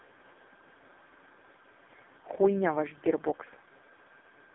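For the whole clip the speech has passed through the AMR narrowband mobile codec, which rebuilds the voice from a vocal-tract model fed by a few pulses per frame at a very low bitrate. Heavy coding damage like this fits AMR-NB's lowest 4.75 kbps mode. The line band runs from 250 Hz to 3.6 kHz, with nothing above 3.7 kHz, so the voice is thin and muffled and takes on a buzzy, synthetic, phone-call quality.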